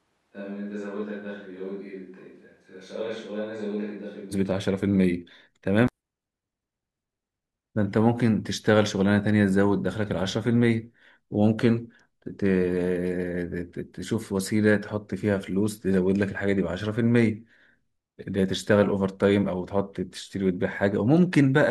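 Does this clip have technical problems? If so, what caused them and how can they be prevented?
Yes. From the very start up to 4.31 s the speech sounds like a switch to a distant microphone: roomy and hollow, thin in the bass, roughly 10 dB quieter, with room noise raised, sitting perhaps 35 dB below the voice. At 4.31 s it snaps to the close, fuller sound. The likely cause is that the close mic's signal dropped or wasn't used for those first seconds, leaving a farther mic such as the camera's to carry the audio. To prevent it, monitor the close mic on headphones from the first frame and check it's actually armed and live before rolling.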